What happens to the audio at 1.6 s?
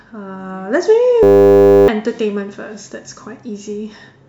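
At 1.6 s the speech is replaced by a system hang loop, running from 1.23 to 1.88 s. The computer or its audio driver stalled. The sound hardware kept replaying the same 10 ms stretch of its ring buffer, about 65 times over. Because the loop is so short, it repeats at 100 Hz. It comes across as a steady, flat buzz instead of a stutter. Roughly 0.7 s of the actual speech is lost.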